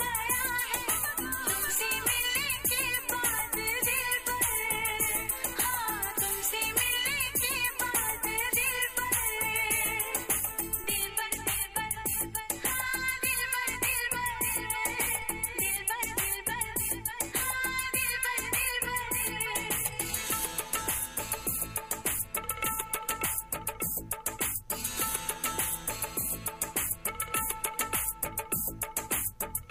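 At 10.84 s a DC step occurs. The zero line of the waveform jumps suddenly to an offset of about -37 dBFS. It does not hold there. It drains away slowly, as a high-pass filter near 2 Hz pulls it back to zero. The jump itself is heard as a single low thump or click. The audio passes through it unchanged. The slow return of the offset is below hearing.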